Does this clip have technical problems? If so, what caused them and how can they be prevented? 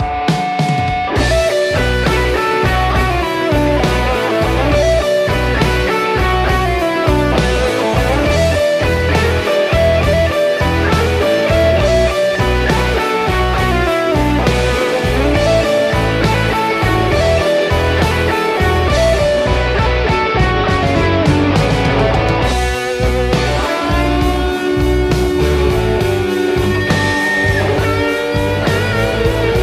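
Yes. From 9.38 to 15.12 s there is periodic clock jitter: interference modulated the converter's sampling clock at around 1 kHz, so every component of the sound picks up sidebands spaced that far above and below it, more strongly for higher frequencies, giving a rough, metallic edge that disappears in silence. Unlike flutter, the pitch doesn't waver; the added tones sit at fixed spacing. Prevent it with a clean, well-isolated clock supply and shielded, properly grounded converter wiring.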